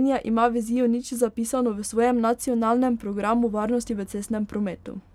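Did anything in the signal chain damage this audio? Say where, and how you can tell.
No, nothing in the chain damaged it.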